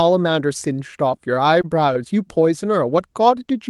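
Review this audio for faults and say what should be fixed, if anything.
Scattered short gaps occur between 0.91 and 1.97 s in this speech. About seven packets went missing or arrived late across that second. Each hole was patched by extending the preceding sound, around 70 ms of fill in total, and none longer than about 20 ms. The result is small ticks and brief smears, roughly a fifteenth of the stretch. The band-limit near 12 kHz fits an Opus call path. To prevent it, use a steadier network link and a deeper jitter buffer.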